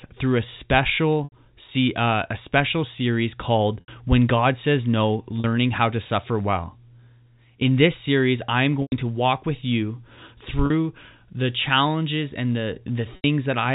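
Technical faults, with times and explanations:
1.24 to 13.24 s, packet loss with pitch repetition: dropouts at 1.24 s (80 ms), 3.80 s (80 ms), 5.40 s (40 ms), 8.82 s (100 ms), 10.66 s (40 ms) and 13.16 s (80 ms), lengths that fit runs of 20 ms packets. Each gap is bridged by looping the last pitch period, so the speech briefly holds a buzzy, frozen tone. The 40 ms gaps stay buzzy throughout. The 80 and 100 ms gaps fade toward silence before speech cross-fades back in. This repeated tone separates it from a plain dropout's silence or click. The band-limited G.711 telephone sound is audible underneath.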